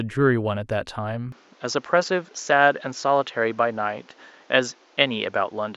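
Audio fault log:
1.32 s to end, input switched to a poorer device: from 1.32 s the speech turns duller, losing everything above 7.6 kHz, with new background noise around 35 dB below it, no gap, and the level roughly unchanged. The input likely moved to a narrower-band microphone.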